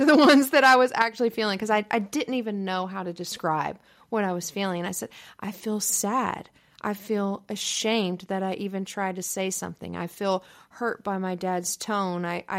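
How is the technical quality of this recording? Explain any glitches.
The recording has two faults, both in roughly the first second of the speech.

From 0.08 to 0.75 s, microphone overload: peaks run about 6 dB past the converter's limit, likely from excessive input gain, flattening a few percent of samples into harsh crackle.

At 1.02 s, microphone volume stepped down: level drops by about 6 dB in one step just before "feeling because I I", likely an automatic gain correction after the clipping.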